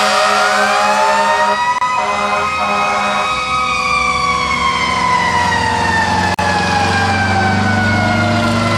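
At 1.78 s the sound drops out for about 29 ms, and at 6.34 s for about 44 ms, then resumes where it stopped. These are gaps at joins of encoded pieces: separately encoded sections were butted together untrimmed, leaving each encoder's start delay and final-frame padding in place.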